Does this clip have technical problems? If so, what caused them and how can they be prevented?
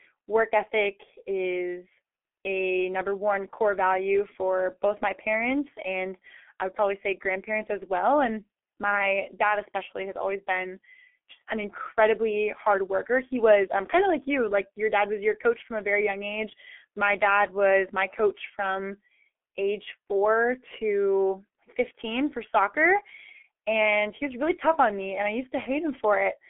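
Yes, the whole clip has gone through a G.723.1 codec, and it's heavily damaged. The speech has nothing above about 3.7 kHz, with a telephone-style band from roughly 250 Hz to 3.4 kHz, so it comes out muffled. The hoarse, smeared consonants point to a very low rate, around 6.3 kbit/s. At that rate the codec works in coarse 30 ms frames and updates its voice model slowly, so fast transitions get blurred. To prevent it, carry the call over a wideband codec such as Opus at a decent bitrate instead of G.723.1.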